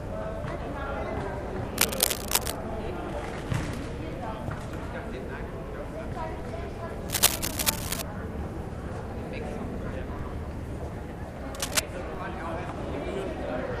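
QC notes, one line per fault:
1.77–2.56 s, 7.09–8.02 s and 11.55–11.79 s, cable scratch noise: dense, uneven rustling bursts sit slightly above the sound, likely from a worn cable or connector being moved. On the spectrogram they show as broadband, ragged vertical smears; the waveform looks fuzzy and spiky.
6.40 s, 10.19 s and 12.15 s, DC step: the waveform's zero line jumps by about −33, −33 and −35 dBFS, heard as a low thump. The waveform shows a sudden baseline shift that sags back as a 5 Hz high-pass drains it, with a brief low-frequency blip on the spectrogram.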